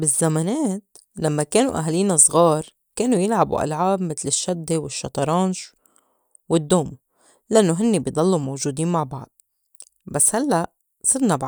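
Speech recording with no audible technical faults anywhere in the clip.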